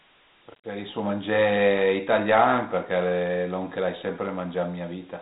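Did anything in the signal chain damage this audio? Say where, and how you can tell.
Yes, at the codec stage: Dialogic VOX ADPCM coding, which fits 4-bit samples at 8,000 a second, about 32 kbps. Each step is coarsely quantized, so plainly audible gritty hiss rides on the speech throughout, and nothing survives above 3.8 kHz.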